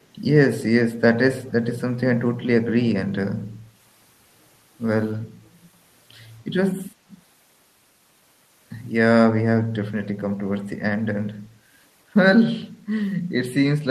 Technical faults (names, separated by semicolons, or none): echo leak